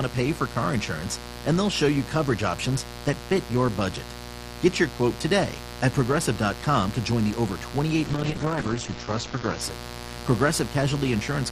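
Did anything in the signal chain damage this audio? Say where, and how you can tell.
Yes. Mains buzz runs through the whole clip, introduced in the analogue wiring. A steady, raspy 60 Hz buzz sits only about 10 dB below the speech. Its harsh, spiky edge comes from switching spikes entering twice per mains cycle through a dimmer, rectifier or broken shield, spreading harmonics well into the kilohertz range.

A call bitrate drop from 8.11 to 9.67 s happens at the call-processing and codec stage. The speech turns rough and muffled, with its top end cut from 20 kHz to 8 kHz for about 1.46 s. That fits a fall from roughly 32 to 8 kbps after the bandwidth estimate collapsed and Opus coded more coarsely.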